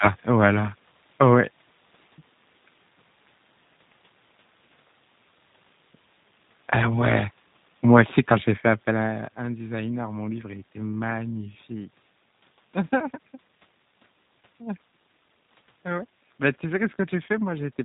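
Throughout the speech, G.729 coding is plainly audible. The sound is confined below 4 kHz and has the rough, synthetic buzz of a low-rate codec that rebuilds each 10 ms frame from a filter, a pitch predictor and a few pulses, which fits an 8 kbit/s stream. Unlike simple band-limiting, the room noise warbles. The level shift around 8.5 seconds, where the talker moves, is not part of it.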